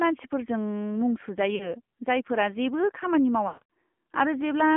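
A speech clip carried over the AMR narrowband mobile codec: buzzy, synthetic and band-limited to 200 Hz–3.4 kHz, which fits a low mode near 7.4 kbps; a spectrogram shows nothing above 3.4 kHz. Lost AMR speech frames cause a brief warble at 1.56–1.75 s from 40 ms of missing audio. From 3.48 to 3.76 s, 220 ms of loss, with a longest run of 140 ms, smears the sound into fading, stretched tones, visible as blurred, decaying harmonics and a sagging waveform envelope.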